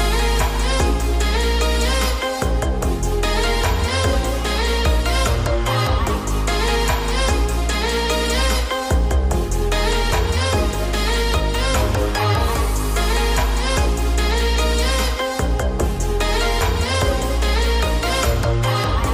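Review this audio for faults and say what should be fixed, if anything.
Nothing here needs fixing; the audio holds together from beginning to end without anything that calls for a repair.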